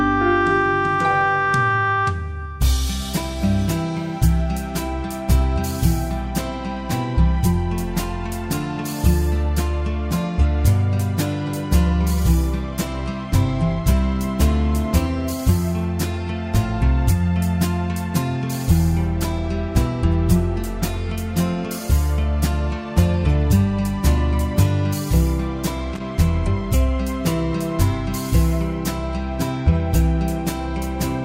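At 25.95 to 26.00 s there is a short burst of loose connector crackle lasting about 60 ms. A worn or dirty contact is making and breaking rapidly, chopping the signal on and off and producing an irregular, scratchy crackle rather than a clean single click.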